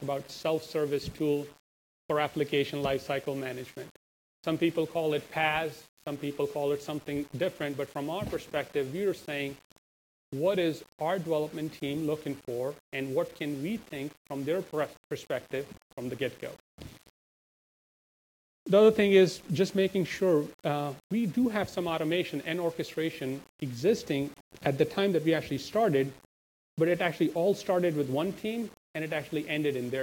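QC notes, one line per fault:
Throughout: low bit depth without dither. A grainy, rasping distortion rides on the sound and shifts with it, roughly 25 dB below the signal, and the quietest passages sputter or fall to silence. This is likely coarse rounding with no dither, which fits about 7-bit resolution. Because the error tracks the signal, it vanishes in silence and changes character with level. Dithered truncation would leave a steady, even hiss instead.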